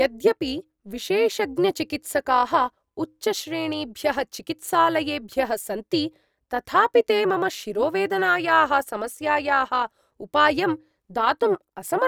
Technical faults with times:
0.00-12.07 overlap-add ripple

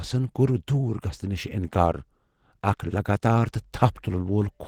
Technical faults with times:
0.00-4.67 Opus compression

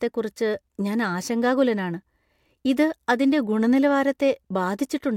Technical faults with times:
none

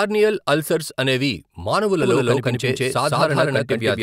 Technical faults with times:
2.03-4.03 doubled audio track

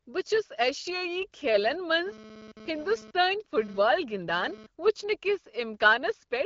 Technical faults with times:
1.66-4.66 GSM phone buzz

